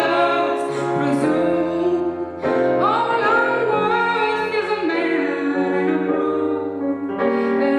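For the first 2 seconds the sound is thin, bright and hissy at the top, with sibilants standing out. This is pre-emphasis left on: the treble boost, consistent with the CD 50/15 µs curve, was never undone, leaving 10 kHz about 8 dB too strong relative to 1 kHz.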